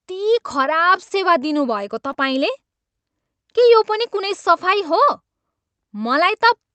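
At 1.09 to 1.12 s the speech holds a sound slightly too long with a faint buzz or dip. This is a short stall from a late packet: the jitter buffer ran dry, the receiver stretched the last sound by 20 ms, and nothing was lost. At 2.12 to 2.16 s a brief smear or wobble replaces part of a sound. This is short concealed packet loss: 20 ms never arrived, and the receiver synthesized a continuation of the preceding audio before blending back. Both ride on an Opus call path at 32 kbps whose top end stops near 8 kHz.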